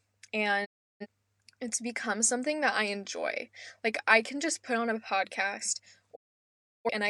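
Speech, with two digital broadcast dropouts: the sound fades out over about 20 ms at 0.64 s and is muted until 1.06 s, then again from 6.15 s to 6.89 s. The receiver lost valid frames and muted until clean ones arrived, so that audio is simply gone.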